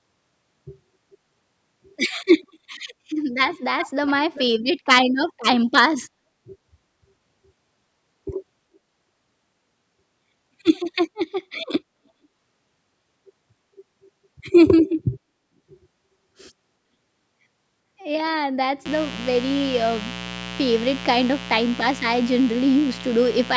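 Echo leak at 1.11–1.18, 2.43–2.47, 3.78–3.91 and 4.33–4.45 s: delayed scraps of the speech return about 0.44 s, then 0.39 s, later, likely a far-end loudspeaker's echo canceller missing residue. The last two are much louder than the first two. Mains buzz from 18.86 s to the end: sharp switching spikes, twice in every 60 Hz cycle, add a steady, raspy harmonic buzz roughly 15 dB below the signal.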